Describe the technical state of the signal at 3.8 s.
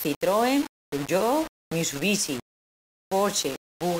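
Low bit depth without dither is present at 3.8 s, as it is across the whole clip. The speech is likely held to about 4 bits and rounded, so the error tracks the signal at roughly 15 dB below it, leaving a grainy, gritty distortion that shifts with the sound.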